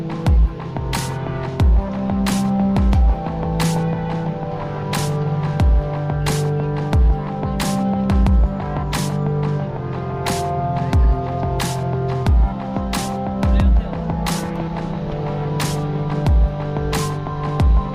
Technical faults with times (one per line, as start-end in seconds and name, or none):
none